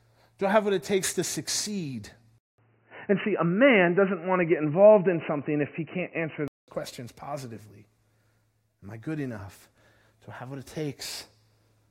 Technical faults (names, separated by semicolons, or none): input switched to a poorer device